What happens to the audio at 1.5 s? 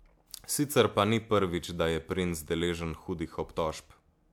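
Nothing goes wrong at 1.5 s; the speech runs through that moment intact, with no dropout, click, distortion or other fault.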